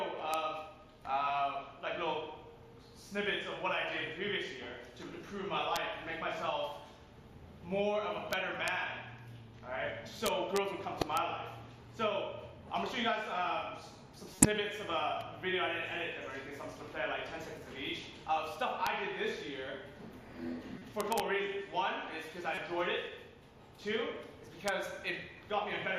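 A gain stage overruns its integer range and wraps to the opposite sign instead of limiting, so peaks only about 0 to 2 dB over full scale flip across the range. This integer overflow gives sharp cracks at 0.34 s and 5.76 s, and a crackling stretch from 8.33 to 8.68 s and again from 10.26 to 10.57 s. At 11.00 to 11.03 s a corrupt frame is decoded: flipped bits misplace energy in frequency for a couple of frames, giving a short glitch. Another overflow crack follows at 11.17 s. A louder five-frame burst comes at 14.35 to 14.46 s, then a crack at 18.87 s, a faint glitch at 20.78 to 20.86 s, overflow crackle at 21.01 to 21.20 s, another corrupt-frame glitch at 22.52 to 22.58 s, and a final crack at 24.68 s.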